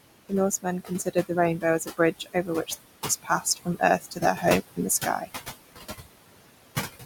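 Throughout the clip a noise suppressor is pulling the steady background down by about 19 dB wherever it judges a band to be noise. The room noise, only about 10 dB below the speech, therefore sinks in the gaps and swells back under speech.

The same noise suppressor cuts speech, misreading quiet parts as background. It dips them by about 14 to 18 dB at 0.62–1.31 s, 1.8–2.5 s, 3.23–3.82 s, 4.01–4.44 s and 5.03–5.29 s. Each time, a brief stretch of a few hundred milliseconds or less sounds swallowed or faint.

Two digital wireless dropouts occur where the receiver lost too much data and muted. The first runs from 2.75 to 3.05 s, about 305 ms, and the second from 4.60 to 4.76 s, about 163 ms. Each is a clean hole of near silence with no noise burst at either edge.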